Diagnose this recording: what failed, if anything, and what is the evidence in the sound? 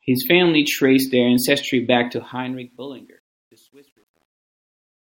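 Sample-format conversion: truncation distortion on a fade. After "traced their ancestry back", the fade-out turns gritty from 2.07 s and is worst from 2.83 to 5.18 s, which fits an undithered 10-bit stage. Unlike codec artefacts, the grit worsens as the level falls.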